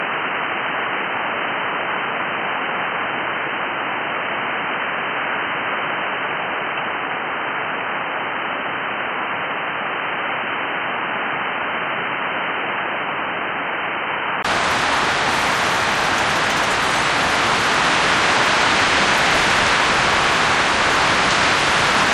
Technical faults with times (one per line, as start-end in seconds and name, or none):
0.00-14.45 input switched to a poorer device